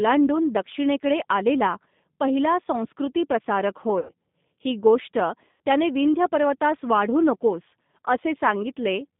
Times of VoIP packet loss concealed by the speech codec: 3.99-4.12, 5.52-5.61

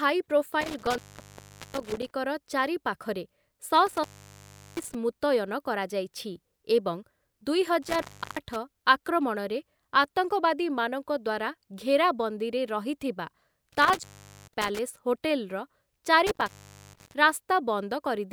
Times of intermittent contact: 0.61-2.11, 3.87-4.95, 7.82-8.56, 13.72-14.79, 16.27-17.14

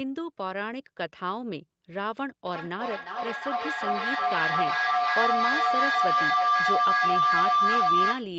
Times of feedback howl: 2.46-8.36

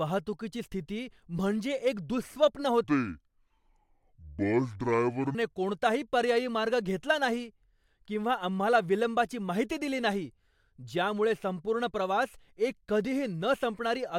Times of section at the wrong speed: 2.84-5.35

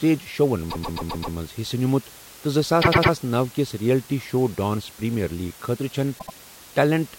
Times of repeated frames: 0.69-1.35, 2.81-3.12, 6.18-6.34

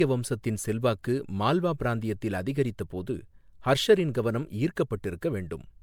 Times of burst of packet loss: none

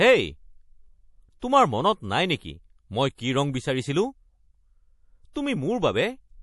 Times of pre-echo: 1.40-1.42, 3.15-3.18, 5.33-5.36

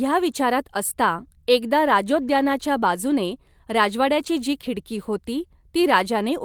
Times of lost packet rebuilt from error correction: 4.19-4.25

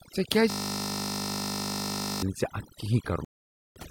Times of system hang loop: 0.50-2.22

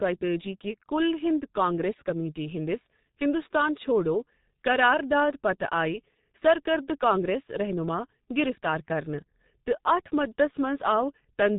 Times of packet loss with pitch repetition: none

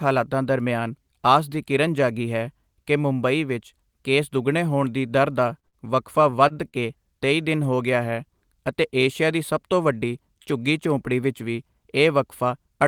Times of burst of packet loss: 5.67-5.76

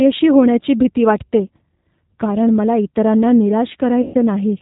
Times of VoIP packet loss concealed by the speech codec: 4.02-4.16

